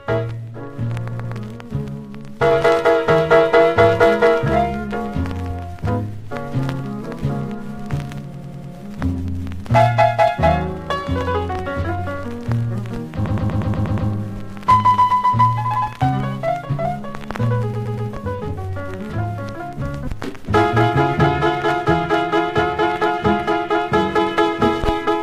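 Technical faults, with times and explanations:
1.11–1.35 s, 8.33–8.73 s, 13.25–14.09 s, 17.73–18.09 s: repeated frames. A 100–120 ms block replays two to seven extra times. Unlike a dropout, nothing goes missing; the audio stutters and grows longer.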